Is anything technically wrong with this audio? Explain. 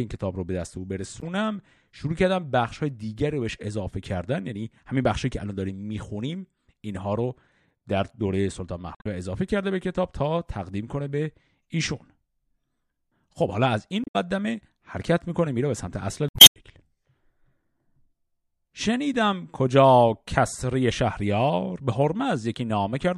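Yes, the speech hits damaged data in a compressed stream four times: 1.20–1.23 s, 8.92–9.07 s, 14.01–14.16 s and 16.29–16.56 s. Corrupted bytes throw the decoder off, so it loses frame sync and hunts for the next header, giving a brief chirp, squawk, click or short hole at each.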